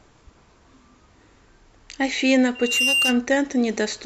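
A speech clip with loudspeaker feedback squeal from 2.55 to 3.22 s. A single tone near 2.8 kHz swells over roughly a third of a second. It reaches about the level of the speech. The microphone is hearing its own loudspeaker, and the loop gain exceeds one at that frequency.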